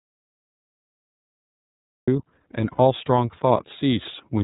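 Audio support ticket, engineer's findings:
iLBC codec, throughout: band-limited to 4 kHz, slightly rough, synthetic speech texture; per-frame independent excitation coding, consistent with the 13.33 kbps, 30 ms frame mode.

Audio dropout to silence, 0 to 2.08 s: already under way at start, silent with no room tone; likely input loss or mute while the encoder kept writing.

Lost iLBC frames, 2.72 to 2.79 s: 60 ms held, buzzy vowel-like sound; decoder concealment repeating the last pitch cycle with noise, fitting two lost 30 ms frames, with quick recovery afterward.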